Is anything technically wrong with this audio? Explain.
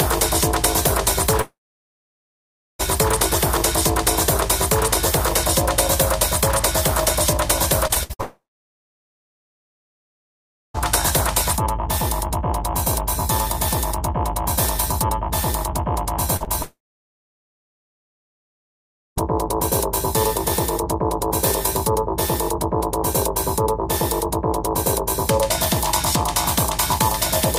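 Yes. The audio has network packet-loss faults of three kinds.

Long network dropouts occur at 1.41–2.81 s, 8.21–10.76 s and 16.62–19.18 s, with about 1.4 s, 2.5 s and 2.5 s missing. The cause is likely a stalled stream. The last sound is extended briefly as a fading buzz, then goes quiet for most of each span. On a waveform this appears as a flat band, and on a spectrogram as a short smeared tail and then near-empty columns.

Scattered short gaps run from 7.87 to 10.82 s, roughly seven of them, the longest around 70 ms. Each lost packet was patched by continuing the preceding sound, giving brief ticks and hiccups. A spectrogram shows thin vertical seams and smears where the patches sit.

Short concealed packet loss hits at 16.36–16.42 s, with 40 ms missing, and at 16.45–16.48 s, with 20 ms missing, just before the third dropout. The decoder filled each hole from the previous signal and blended back in, heard as a quick wobble or smear. 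The waveform shows tiny discontinuities there.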